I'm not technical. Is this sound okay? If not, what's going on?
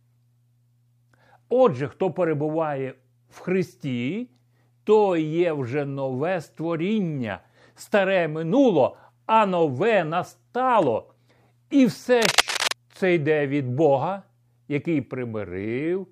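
No, not quite. From about 12.22 to 12.73 seconds there's a half-second burst of scratchy, rustling noise, roughly as loud as the speech itself, just before "це йде від". That's what's called cable scratch noise. It's likely from a worn cable, plug or knob being moved: a loose contact flickers in and out, and each flicker turns into a crackle of uneven noise sitting on top of the speech.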